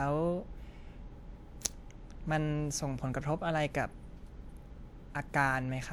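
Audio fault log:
No faults heard.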